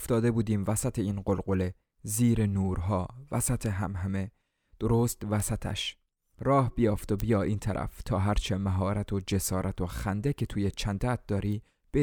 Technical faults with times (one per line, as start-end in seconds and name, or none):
3.66 bit error spike
5.40 bit error spike
7.20 bit error spike
11.52 bit error spike